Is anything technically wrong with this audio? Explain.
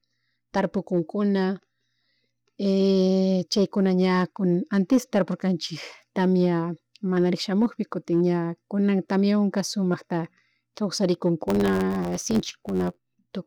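Yes. From 11.47 to 13.19 s the speech carries a block size mismatch (truncated). One stage writes blocks longer than the next stage reads, so the tail of every block is dropped, which fits 512-sample blocks. The regular cuts produce a buzz at 91.9 Hz, and the speech runs 1.07 times fast while its timbre stays. That unchanged timbre separates it from a sample-rate error, and the evenly spaced buzz separates it from random dropouts.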